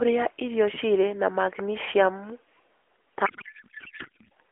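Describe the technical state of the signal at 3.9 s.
At 3.9 s there is a codec payload misread, from 3.26 to 4.30 s. The AMR frames appear packed octet-aligned but are decoded as bandwidth-efficient, so the speech becomes garbled noise and warble.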